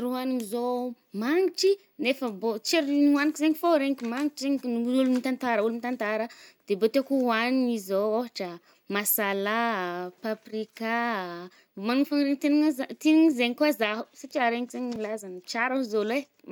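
A single sharp tick cuts through the speech at 14.96 s. It is a block of digital silence about 2.7 ms long, which fits a 128-sample buffer left unfilled in time, so the sound drops abruptly out and snaps back without any fade.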